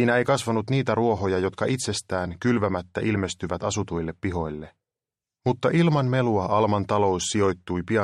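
Nothing is technically wrong with this audio.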